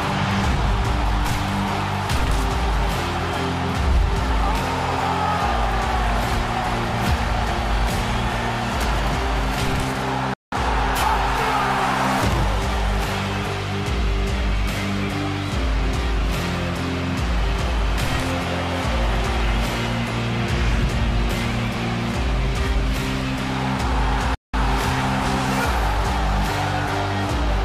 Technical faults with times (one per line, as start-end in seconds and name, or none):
10.34-10.52 playback stall
24.35-24.54 playback stall